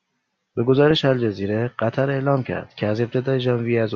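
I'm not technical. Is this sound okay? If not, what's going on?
Yes, this short speech recording is in sound technical shape, with nothing going wrong in how the signal was captured or carried.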